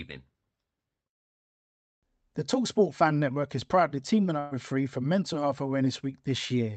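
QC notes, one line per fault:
4.39–4.54 s: burst of packet loss, right after "is proudly teaming". About 120 ms of audio never arrived; the receiver stretched and faded the last sound to cover roughly 118 ms, heard as a smeared tail, then the speech resumes with that stretch missing.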